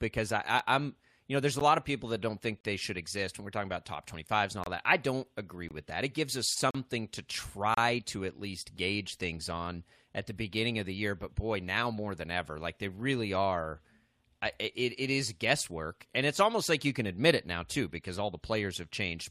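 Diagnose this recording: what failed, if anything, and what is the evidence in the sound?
The stream's segment timestamps fail to line up at the network and playback stage, leaving a gap between stream segments that the player pads with silence. In this speech, hard-edged dropouts land about once per second, at 0.59, 1.59, 2.61 to 2.64, 4.64 to 4.66, 5.69 to 5.71 (between "that I don't agree" and "with that"), 6.71 to 6.75, 7.74 to 7.77 and 8.77 s. They last from about 3 to 40 ms. Nothing is lost; silence is inserted.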